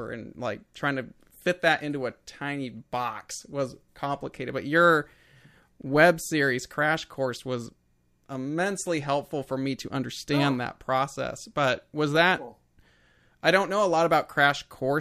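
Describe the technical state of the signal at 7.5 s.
At 7.5 s the signal is intact, with no audible dropout, clipping, distortion or other technical fault at that point.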